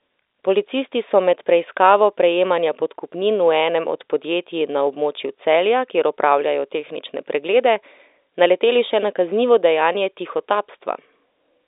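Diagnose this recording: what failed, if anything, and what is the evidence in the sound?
Nothing has failed: the speech sits in an ordinary telephone band of roughly 300 Hz to 3.7 kHz with nothing above 3.8 kHz, which is the expected signature of a working G.711 mu-law telephone path rather than a fault.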